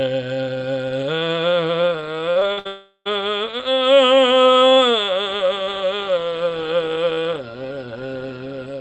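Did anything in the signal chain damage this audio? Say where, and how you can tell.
Yes, the network stage damaged this music. From 2.31 s to 2.67 s there is repeated packet loss with a robotic sound. Four short gaps, the longest 60 ms, are each patched by extending the last sound, so about 44% of that stretch is concealment. Separate holes give a choppy, robotic texture rather than one silence.

From 2.67 s to 3.07 s the music drops out entirely. The last sound is stretched into a fading buzz or hiss and then settles into about 50 ms of silence before the music returns with that section missing. A single long dropout like this is likely a long network outage, not scattered loss. The call path's band limit is audible as a top near 8 kHz.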